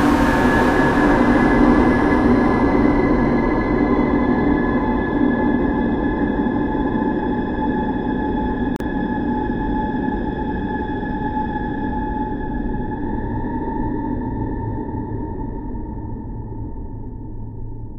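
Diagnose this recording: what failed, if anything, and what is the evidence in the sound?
A gap at a join of encoded pieces, a codec-stage fault, breaks the continuous sound from 8.76 to 8.80 s: a 40 ms gap with smeared edges, then the sound resumes where it stopped. Untrimmed encoder delay and end padding from separately encoded pieces, about 10 s long, remain at the join. A spectrogram shows a thin vertical blank band, and the waveform dips to flat.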